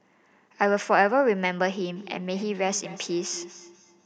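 From 1.96 s to the end, feedback echo between two devices: a second device replays this audio, which returns about every fifth of a second, about 20 dB below the speech.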